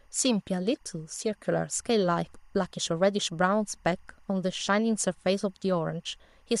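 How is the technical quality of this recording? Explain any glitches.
The recording has one fault: timecode bleed running through the whole of the speech. Linear timecode at 24 frames per second is leaking from a neighbouring track or cable into the audio path. Because that code is a square wave flipping between tones around 1 and 2 kHz, it sits behind the speech as a steady chirping warble, faint at roughly 45 dB below the speech but continuous from start to finish.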